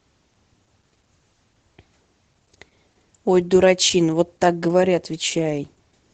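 Across the whole clip the speech sounds muffled and hoarse, with a faint robotic edge and nothing above about 8 kHz, the plainly audible mark of Opus voice compression. The codec is running its SILK linear-prediction coder in wideband mode, which caps the band at 8 kHz, and at a rate that fits roughly 12 kbps it describes the excitation only coarsely.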